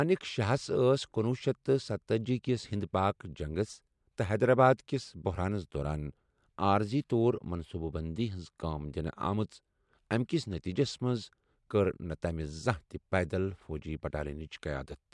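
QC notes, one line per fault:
No faults found in this speech recording. Nothing in it calls for a note.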